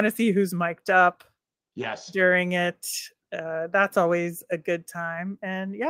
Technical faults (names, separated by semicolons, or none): none